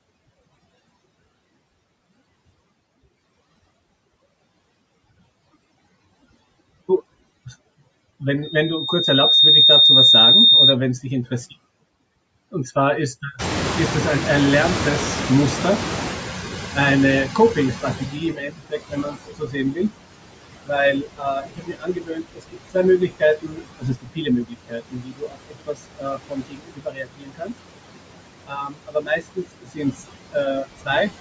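Across the whole clip the speech carries overdone noise removal. The reduction is set so hard that frequency bands near the noise estimate are pushed far down or shut off entirely, and the quieter parts of the speech spectrum are removed along with them. Pauses fall to near silence scattered with twinkling specks, and the speech itself loses the low-level detail that normally fills it out.

Running alongside that are noise suppressor artifacts. The steady background is held down by about 20 dB, frame by frame, so it drops away in the gaps and rises back underneath each stretch of speech.

From 8.42 s to 10.77 s there is a loudspeaker feedback squeal. The microphone picks up the loudspeaker it feeds, and at 3.7 kHz the loop gain goes above unity. That single tone builds on itself over roughly a second into a squeal, ending up around 10 dB above the speech before it stops.

At about 13.5 s the room noise jumps by about 22 dB, and the clip shows the noise suppressor catching up from 13.38 s to 18.46 s. 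The suppressor's noise estimate lags behind the new level, so the louder background comes through only lightly reduced at first. It then sinks gradually over about 5.1 s until the reduction reaches about 19 dB. The shift is heard as a noise floor that slowly drains away.

Speech cut by the noise suppressor follows in six places: 17.75–19.79 s, 20.93–22.76 s, 22.98–27.54 s, 28.47–29.45 s, 29.61–30.02 s and 30.63–30.90 s. The suppressor mistakes parts of the speech for noise and pulls them down by about 20 to 22 dB at the deepest. Soft consonants, word endings and quieter phrases sound swallowed or faint. The longest affected stretch is the one from 22.98 s to 27.54 s.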